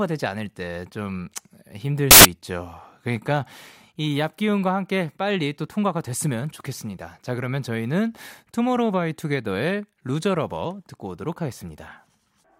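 From 2.11 to 2.25 s the speech gives way to a burst of loud, harsh broadband noise. These are samples built from the wrong bytes: each value is assembled misaligned or byte-swapped, so the rapidly changing low-order bits become the dominant part and the sound turns to harsh noise.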